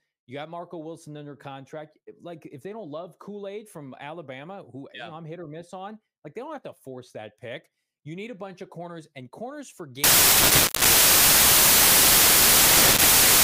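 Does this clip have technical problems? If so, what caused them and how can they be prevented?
Yes. From 10.04 s, right after "corners and corners for", to the end at 13.43 s, the speech gives way to loud broadband noise: samples built from the wrong bytes. Each value is assembled misaligned or with its bytes swapped, so the rapidly changing low bits land in the top of the number and swamp the signal. Unlike ordinary hiss or clipping, the noise is loud and harsh, spread across the whole band. To prevent it, declare and check byte order, sample width and frame alignment whenever raw audio is read or concatenated.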